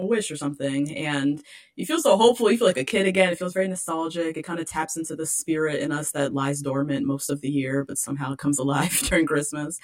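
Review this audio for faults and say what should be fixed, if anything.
Channel delay (comb filtering) throughout: one channel arrives around 20 ms late before the mono sum, cutting evenly spaced notches from about 20 Hz upward, making the speech sound rough and slightly doubled. Align channel timing, or check phase correlation, before folding to mono.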